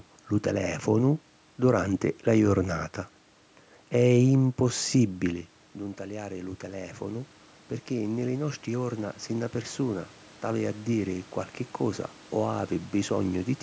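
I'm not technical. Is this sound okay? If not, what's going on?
No. The call's automatic gain control heard the speech go quiet around 5 seconds, likely because the talker moved away from the microphone, and from 4.62 to 7.38 seconds it slowly turned itself up. The voice and the room noise behind it swell louder together over those few seconds.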